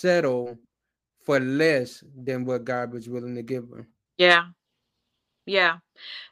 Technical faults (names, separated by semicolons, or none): none